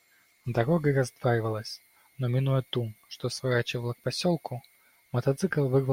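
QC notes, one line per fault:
No faults heard in this clip.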